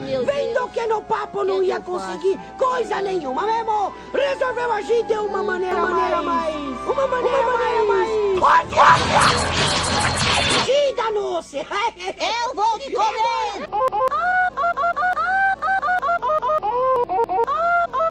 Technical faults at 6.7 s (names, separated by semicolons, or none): doubled audio track